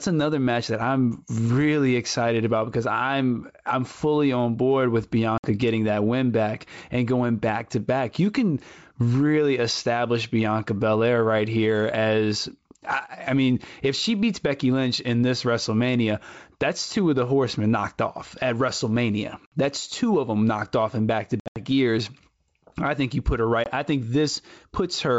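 Hard-edged silent holes break the speech at 5.38–5.48 s (60 ms lost, between "fully on board with" and "getting that win back"), 19.46–19.57 s (60 ms), 21.40–21.57 s (140 ms scattered over 160 ms, longest gap 80 ms, after "off in back to"), and 23.64–23.72 s (20 ms, between "think you put her" and "I think"). After each gap the audio comes back with brief, slight distortion that settles within tens of milliseconds. This is packet loss on an ADPCM call. Lost packets were filled with silence, and the decoder's adaptive predictor and step size drifted out of step with the sender's until they caught up again. The G.722 wideband coding at 64 kbit/s carries speech clearly up to 7 kHz between the dropouts.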